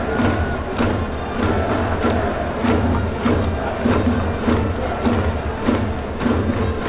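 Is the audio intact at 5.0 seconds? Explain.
Yes, the audio is intact at 5.0 seconds, with no dropout, glitch or other fault at that moment.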